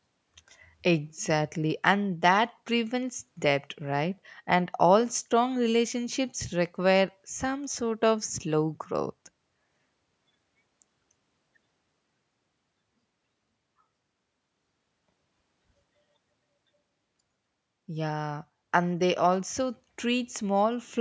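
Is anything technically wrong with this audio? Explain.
No, nothing technically wrong stood out on listening to this speech, which went through normal call microphone processing that trims the lowest bass and carries nothing above 8 kHz.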